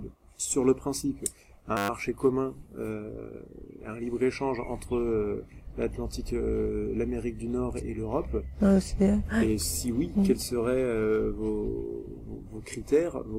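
From 1.77 to 1.89 s the sound turns into a steady 100 Hz buzz: a 10 ms fragment repeats exactly, about a dozen times, and around a tenth of a second of audio is lost. This is a system hang loop, where the system stalled while the hardware kept replaying one short buffer.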